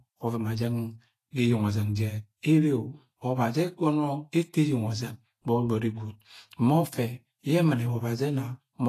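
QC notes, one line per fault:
Throughout, Vorbis compression: the speech has a hissy, grainy treble, roughened tones and softened consonant attacks, with nothing above 14.2 kHz. The likely cause is an encoder at low quality, which fits a bitrate near 33 kbps, cutting the top band and quantising the treble so coarsely that fine detail turns to noise of similar energy. Unlike a plain low-pass filter, the remaining highs sound noisy rather than merely dull.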